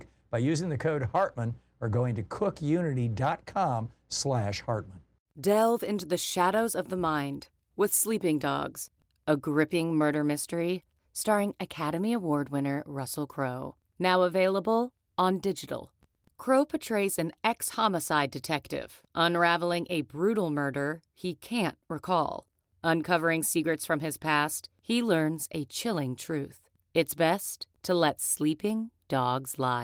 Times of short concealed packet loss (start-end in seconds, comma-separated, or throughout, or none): none